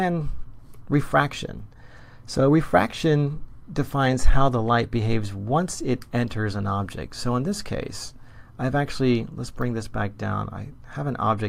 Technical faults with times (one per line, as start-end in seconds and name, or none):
none